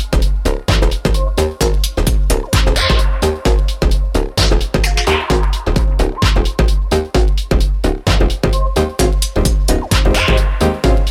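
No technical faults can be heard in this audio.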